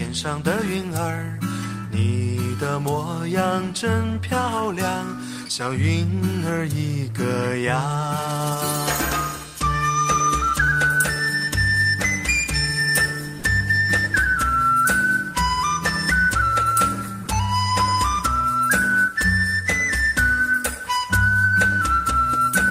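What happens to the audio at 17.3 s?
At 17.25 to 17.27 s, about 20 ms of sound drops out and is replaced by steady noise. The likely cause is sound dropped by the voice detector, which paused sending.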